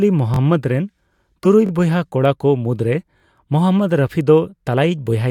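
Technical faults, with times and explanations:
0.34, 1.66 and 3.18 s: repeated buffer. New speech arrived late, so the device replayed its last block twice more each time. A 21 ms piece sounds three times with hard joins, a brief stutter lasting about 43 ms. This fits a 1024-sample buffer.
1.43 s: corrupt frame decoded. Damaged bits in roughly one compressed frame were decoded anyway. Misread values put energy at wrong frequencies for about 22 ms. This produces a short chirp or blip that does not belong to the speech.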